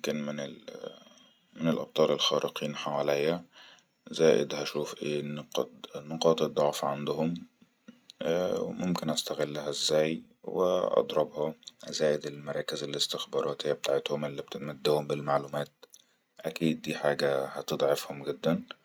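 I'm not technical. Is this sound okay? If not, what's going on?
Yes, nothing stood out as a problem when listening to this recording.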